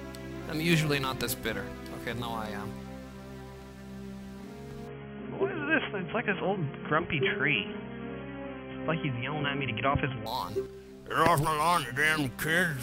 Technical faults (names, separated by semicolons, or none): input switched to a poorer device